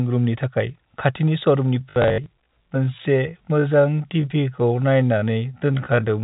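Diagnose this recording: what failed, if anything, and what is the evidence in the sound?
From 1.76 s to the end, the speech slows to about 0.625 times its pace at unchanged pitch, sounding dragged: likely a software time-stretched section that repeats short pieces.

Network stage: between 1.9 and 2.26 s, about 180 ms of packet loss with last packet repeated gives robotic stutters and runs up to 60 ms, consistent with 20 ms packets.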